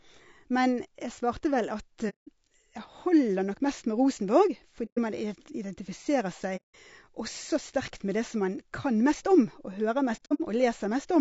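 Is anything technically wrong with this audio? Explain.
Yes, two problems. Throughout, the speech sounds rough and grainy with noise between harmonics, likely from low-delay AAC compression (AAC-ELD) at a low bitrate, around 32 kbps.

There's also AAC frame loss with muting at 2.09 to 2.29 s, 4.85 to 4.99 s, and 6.56 to 6.75 s just before "også sterkt med det." From 10.16 to 10.41 s it's a scattered run of short holes, the longest about 70 ms. Lost frames are zeroed and the overlapping windows fade in and out, so the first three are soft-edged gaps of 120 to 180 ms.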